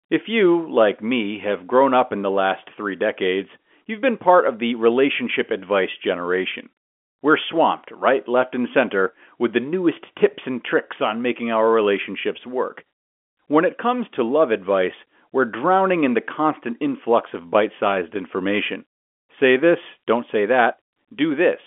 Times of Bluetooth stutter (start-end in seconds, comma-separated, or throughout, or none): none